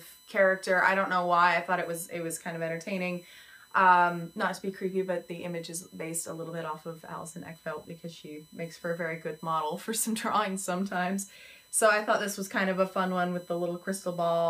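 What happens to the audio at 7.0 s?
USB whine runs through 7.0 s and the whole clip: 1 ms bus frames leak in through power or ground, giving a fixed 1 kHz whine, strongest at 4 kHz, about 30 dB below the sound.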